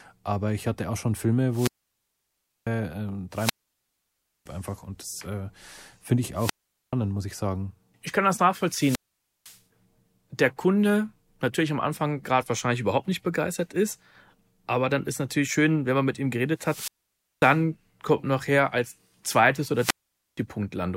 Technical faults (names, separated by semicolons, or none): wireless microphone squelch dropout